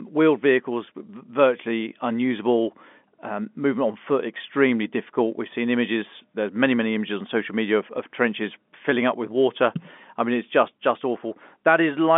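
No technical faults can be heard in the speech, which comes through a G.711 mu-law telephone channel at 64 kbps with the narrow line band of about 200 Hz to 3.5 kHz and nothing above 3.7 kHz.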